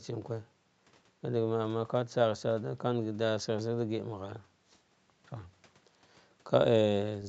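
Nothing goes wrong in this stretch of speech: it comes through the call's microphone processing and codec as you'd expect, with the top end stopping at about 8 kHz.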